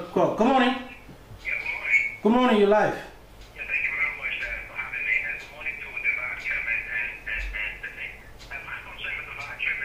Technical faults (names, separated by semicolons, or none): none